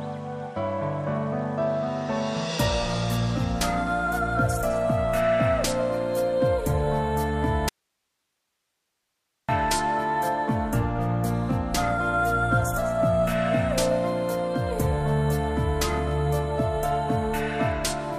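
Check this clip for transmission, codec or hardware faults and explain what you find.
One fault stands out: an audio dropout to a faint residue from 7.69 to 9.49 s. For about 1.8 s the signal cuts off abruptly, leaving only hiss roughly 55 dB below normal level. The likely cause is that the source was lost while the path after the break stayed live. On a waveform the envelope collapses to a thin flat band with square edges. A spectrogram shows sharp vertical cuts into faint, even broadband noise.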